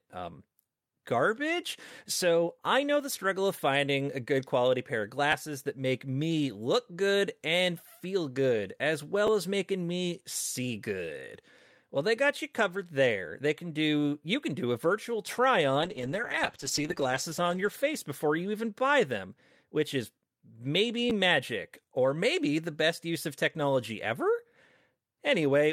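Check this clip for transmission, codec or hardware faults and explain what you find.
The clip has two kinds of fault: three repeated-buffer stutters and one call bitrate drop.

Repeated buffer at 5.32 s (between "good quality pair of" and "that make me look"), 9.27 s and 21.10 s ("them which is maybe" / "magic or maybe the"). Each time new audio arrives late, so the last buffer replays once, about 10.7 ms long, which fits a 512-sample buffer. It is heard as a brief click-like stutter.

Call bitrate drop from 15.84 s to 18.85 s, ending just before "them which is maybe". The encoder falls from 48 to 10 kbps and stays at its lowest for 1.18 s, so the sound turns rough, watery and muffled.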